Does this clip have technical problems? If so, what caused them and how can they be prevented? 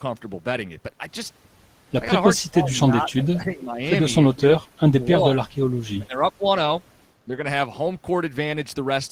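Yes. The speech repeatedly dips, thins or drops out in pieces at 2.41 to 3.07 s, 3.31 to 3.82 s, 4.34 to 5.49 s and 5.95 to 6.44 s. At worst, around 4.3 to 5.5 s, it falls by roughly 35 dB, and there is a much slighter dip at 7.27 to 7.34 s. This is speech suppressed in double talk. It was likely caused by the far end talking at the same time, so the echo canceller could not tell this talker from loudspeaker echo and turned everything down. Using a headset or a canceller with better double-talk detection would prevent it.

Between 3.16 and 3.23 s a brief, faint scrap of the voice comes back about 339 ms late, roughly 20 dB below the speech. This is an echo leak. It was likely caused by a loudspeaker at one end whose echo canceller failed to remove all the sound its microphone picked up, so the remainder was sent back. Lowering speaker volume, moving the microphone away from the speaker or using headphones would prevent it.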